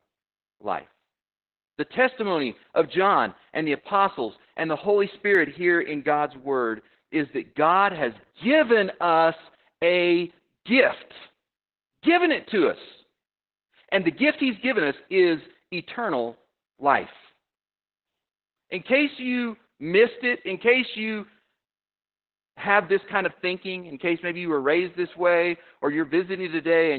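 From start to finish the speech sounds muffled, hoarse and faintly robotic, with nothing above about 4 kHz. This is heavy Opus voice compression: the SILK coder, squeezed to narrowband at what sounds like roughly 8 kbps, cuts the top of the band and codes the excitation coarsely.

At 5.35 s, just before "here in", the sound jumps ahead by a few milliseconds with no gap of silence. This is likely a dropped buffer (overrun), where samples were overwritten before being collected and the surviving edges were butted together.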